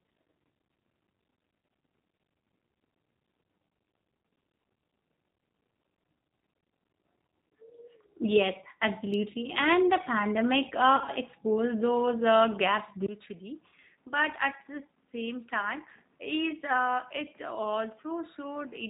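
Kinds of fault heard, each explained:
G.729 codec: throughout, the speech sounds rough and slightly synthetic with nothing above 4 kHz, as this 8 kbit/s codec rebuilds it from a filter, pitch predictor and pulses.
VoIP packet loss concealed by the speech codec: after "the pandemic" near 11.0 s, and again at 13.7 s, speech smears into a brief fading buzz or coloured noise as the decoder extrapolates over lost packets.
Input switched to a poorer device: after a 20 ms gap at 13.06 s, the sound turns duller, about 5 dB quieter, with no content above 3.8 kHz and new background noise, likely from a change to a poorer input.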